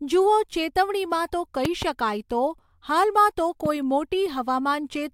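A sudden voltage step, likely from a plug, switch, static or driver glitch, leaks into the signal and produces loud pops. Between 1.65 and 1.85 s, after "જુઓ ચેતવણીમાં તો", two sharp pops stand well above the speech. A milder single pop follows at 3.66 to 3.68 s, after "શકાય તો હાલમાં તો".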